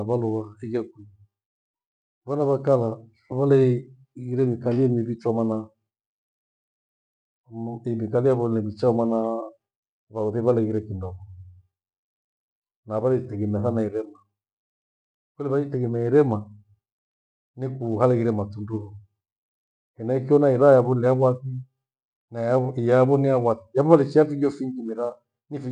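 No faults are audible anywhere in the speech.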